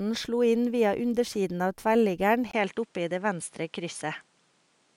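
Input switched to a poorer device at 2.51 s, lasting to the end: after a 20 ms gap the speech loses everything above 10.9 kHz and gains a faint new background hiss at much the same level, likely from recording moving to another microphone.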